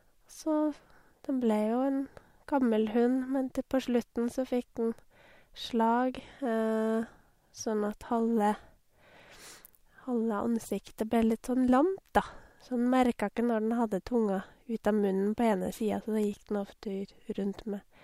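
No technical faults are audible anywhere in this speech recording.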